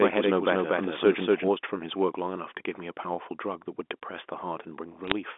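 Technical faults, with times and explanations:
0.00–1.48 s, doubled audio track: A second, full-band copy of the speech runs about 200 ms behind the first at roughly the same level, so every syllable repeats with a hard slapback rather than a smeared room echo. It has no decay or colouring. It is already present when the clip opens and stops abruptly at 1.48 s. This likely comes from the signal reaching the mix twice, once through a slower capture path.
5.04–5.12 s, bit errors on a digital phone line: A short burst of sharp ticks and crackle sits over the speech, which is otherwise unchanged, in the 250 Hz to 3.5 kHz telephone band. Each corrupted bit alters a single 8-bit G.711 sample, and hits on the upper bits, or on the sign of a loud sample, throw that sample far from its neighbours, which produces the clicks. The density suggests an error rate of a few tenths of a percent across a handful of frames.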